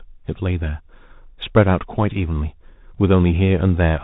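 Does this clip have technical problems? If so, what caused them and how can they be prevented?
Yes. Throughout the speech, a Bluetooth CVSD headset codec has cut everything above about 4 kHz. Under the voice there is a granular hiss, and the s sounds turn scratchy. Loud, bright moments distort because the codec's one-bit, up-or-down steps can't climb fast enough to follow them. That grit and slope distortion is what separates it from a plain band-limited phone line, which is narrow but clean. The sound fits a 64 kbps CVSD link. To prevent it, use a headset and host that negotiate a wideband mSBC or LC3 voice link, or record through a wired microphone.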